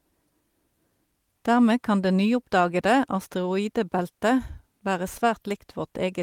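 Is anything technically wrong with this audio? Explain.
No, nothing is technically wrong with this audio.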